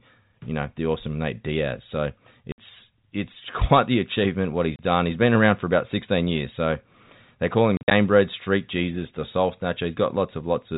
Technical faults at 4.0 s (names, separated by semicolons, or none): none